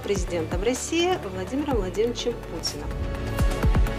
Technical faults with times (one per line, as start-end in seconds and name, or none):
1.16 dropped buffer (overrun)
2.59 dropped buffer (overrun)